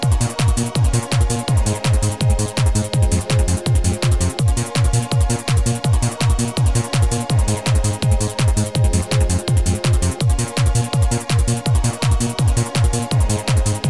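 No technical faults can be heard anywhere in the audio.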